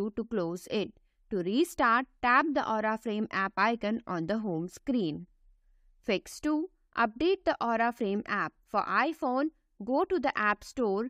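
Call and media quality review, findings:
No audible defects found in the signal; level, continuity and timing stay steady across the whole capture.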